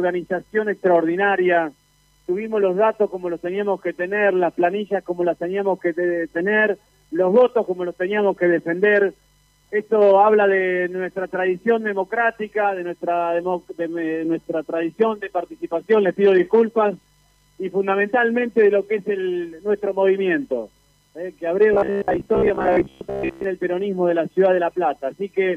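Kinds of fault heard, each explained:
Robotic sound from repeated short buffers: from 21.74 to 23.44 s the sound turns into a rigid, metallic buzz pitched at about 66.7 Hz, while its overall shape is still faintly followed. The likely cause is fresh audio arriving too seldom, so a roughly 15 ms slice is replayed over and over for most of that stretch while real audio is skipped. Unlike a simple dropout or stutter, there is no silence, only the steady imposed pitch.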